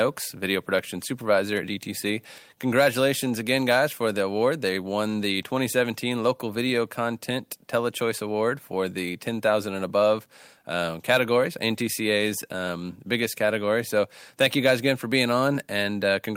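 No technical faults can be heard anywhere in the recording. There are no moments in the speech that need a timestamp or any explanation.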